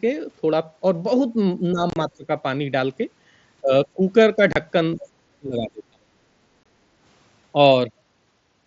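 From 1.72 to 1.8 s the speech sinks by about 10 dB, and it sinks again by about 20 dB from 2.09 to 2.29 s and from 3.61 to 3.99 s. This is likely speech suppressed in double talk, with the echo canceller turning the talker down while the far side was also active.

Between 1.9 and 1.96 s, and again at 4.53 to 4.56 s (30 ms) and 6.63 to 6.66 s (22.5 ms), there are abrupt silent holes. They are unconcealed Bluetooth headset packet loss: the first stretch loses 52.5 ms in fragments within 60 ms, the longest run 30 ms. The square-edged gaps separate it from the suppression.

At 5.04 to 5.09 s a faint second voice, about 20 dB below the speech, is likely the other side's voice leaking through past the echo canceller. It is a separate sound layered on top, not a change to the talker's own level.

The deepest suppression runs from 5.38 to 6.27 s, dropping about 30 dB, with about 700 ms of that span affected. 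The mSBC link itself passes the audio up to 8 kHz with light graininess.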